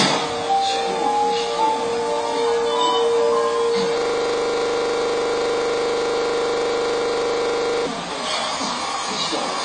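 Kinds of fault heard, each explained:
Low bit depth without dither: The signal was likely rounded to very few levels with no dither, which fits about 5 bits. The error tracks the sound as grainy distortion, sitting not far below it, and quiet passages turn gritty or sputter.
AAC compression: The audio was likely coded as AAC-LC at a low rate, which points to around 24 kbps. Nothing survives above 9.7 kHz, so the sound is dull and smeared, with plainly audible warbling, fizzy codec damage on sustained parts.
System hang loop: From 3.98 s to 7.86 s the system froze while the sound hardware kept replaying its buffer. A 40 ms piece repeats nearly a hundred times, heard as a steady 25 Hz buzzing stutter instead of moving sound.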